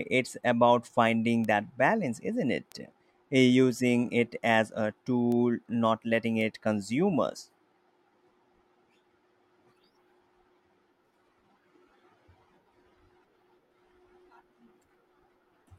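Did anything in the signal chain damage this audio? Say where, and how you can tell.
Yes. Bit error spikes at 1.44, 2.72, 5.32 and 6.41 s, the first right after "about finding": sharp broadband ticks near -18 to -24 dBFS, unrelated to the speech. A bit flipped in storage or on a digital link knocks one or two samples away by a power of two before they snap back.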